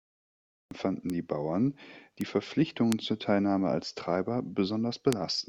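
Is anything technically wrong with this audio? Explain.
Yes. The speech opens with digital silence until 0.71 s, then starts abruptly mid-sound with no attack. This is a cut-off start: capture or streaming began late.

Four sharp, isolated ticks occur at 1.10, 2.21, 2.92 and 5.13 s, the last two slightly thicker. These are bit error spikes: a flipped bit briefly throws one or a few samples far off their true value.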